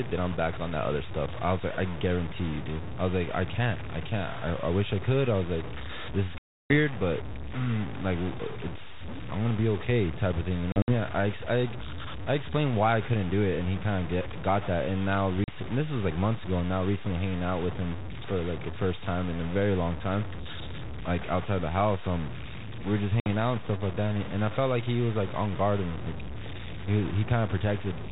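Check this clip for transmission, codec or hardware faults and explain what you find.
Two faults are present: a coarse, undithered quantisation running through the whole clip, and four dropouts from lost packets on what sounds like a G.726 ADPCM call, whose narrow telephone band stops below 4 kHz.

Low bit depth without dither, throughout: the signal was likely truncated to very few bits, around five, with no dither. The rounding error tracks the speech, so a grainy, rasping distortion sits only roughly 15 dB below it, swelling and fading with level and sputtering in quiet stretches.

Packet loss on an ADPCM call, at 6.38 to 6.75 s, 10.72 to 10.92 s, 15.44 to 15.53 s and 23.2 to 23.31 s: lost packets were replaced with silence, about 320, 100 (scattered over 160 ms, longest run 60 ms), 40 and 60 ms. Because the decoder's adaptive predictor and step size lose step with the sender, each hard-edged gap ends with speech returning slightly and briefly distorted.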